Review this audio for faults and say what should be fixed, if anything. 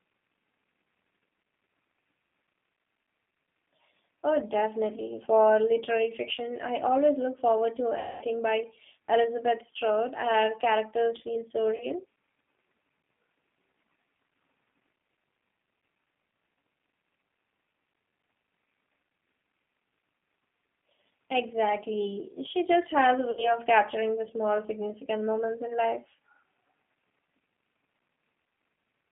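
G.729 codec damage runs through the whole recording. It is plainly audible: the speech is squeezed into roughly 150 Hz to 3.6 kHz and rebuilt from a vocal-tract filter, pitch predictor and sparse pulses, giving a rough, synthetic edge that fits an 8 kbit/s G.729A link. Carrying the call on a wideband codec such as G.722 or Opus would prevent this.

VoIP packet loss concealed by the speech codec occurs at 1.43–1.45 s, 7.99–8.25 s after "always look forward to", 11.76–11.86 s after "characters feel so", and 23.31–23.57 s between "just has a" and "capturing the small significant". The decoder stretches its last pitch and filter into a buzzy tone or coloured noise that fades, and the audio stays weak briefly after each gap. A larger jitter buffer, forward error correction or a more reliable network path would prevent this.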